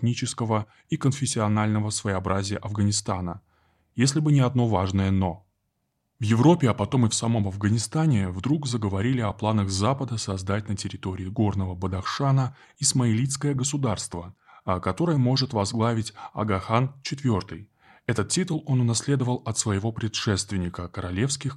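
No technical faults can be heard anywhere in the speech.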